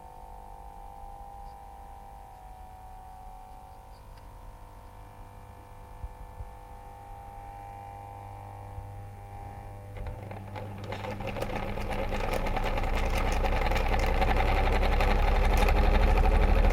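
No technical faults are audible.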